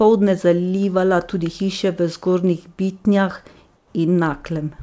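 Speech carried over a call path with nothing above 8 kHz, which fits a G.722 codec. From 3.76 to 3.94 s, comfort noise replaces the background, likely from discontinuous transmission: a smooth, featureless spectrogram band and a flat waveform floor about 3 dB lower.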